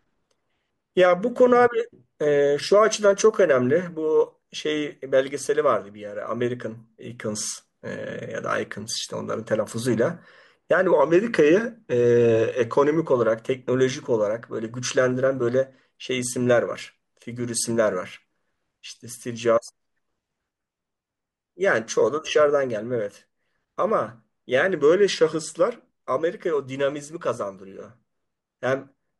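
Drift correction steps at 10.94 to 13.08 s and 24.75 to 25.79 s: the speech slows by about 6% and drops roughly a semitone, then snaps back. This likely comes from clock-matching software abruptly lowering the playback rate to rebalance its buffer.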